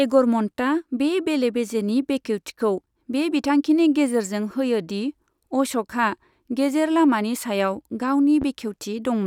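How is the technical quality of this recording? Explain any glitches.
The recording has one technical fault, a single loud pop near the end of the speech.

From 8.42 to 8.45 s a sharp pop cuts in, standing a few decibels above the level of the speech, which carries on underneath it without a break. It is most likely a sudden voltage step or pulse, such as a plug being seated, a switch, a static discharge or a driver glitch, entering the signal chain. The circuits after that point shape the pulse into a brief thump.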